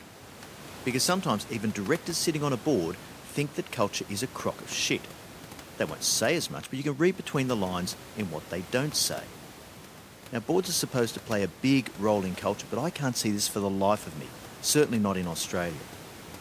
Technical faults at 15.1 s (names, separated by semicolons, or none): none